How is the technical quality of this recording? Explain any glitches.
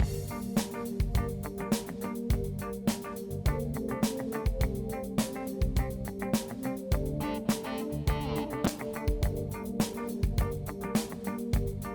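One glitch stands out: a call bitrate drop from 8.66 to 10.73 s. The connection's bandwidth estimate fell and the encoder was starved of bits, which fits a fall from around 64 kbps to about 23 kbps for roughly two seconds. Coarser coding and trimmed high frequencies leave the sound rough, watery or muffled until the rate recovers.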